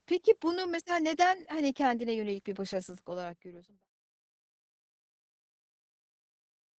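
Opus voice compression runs throughout the speech: nothing remains above about 8.6 kHz, and the coarsely coded excitation leaves voices muffled, hoarse and slightly robotic, which points to SILK near 10 kbps rather than a plain low-pass filter. The smooth fade-out, from roughly 2.5 s to 3.88 s, carries the same coloration.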